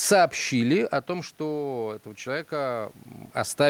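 Speech, in which the voice and the room noise behind it swell together from 1.07 to 3.03 s. This is automatic gain rising: after the voice fell by about 11 dB when the talker moved back around half a second in, the gain climbs by about 3 dB and wins back only part of that loss. The talker moves again at around 3 s.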